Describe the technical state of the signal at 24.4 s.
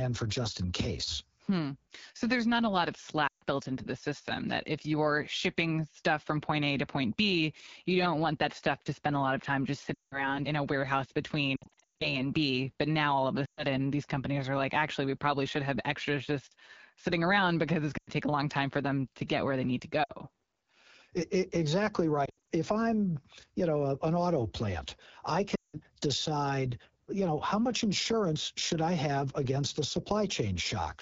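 At 24.4 s the speech sounds rough and raspy, with a buzzy, grainy edge and thin, hissy top end. This is AMR wideband (HD Voice) codec damage that runs through the whole clip, not a local event. The codec rebuilds speech below 6.4 kHz from a pulse-excited vocal tract model and fills 6.4 to 7 kHz with shaped noise. The coarseness fits one of its two lowest modes, around 8.85 kbit/s.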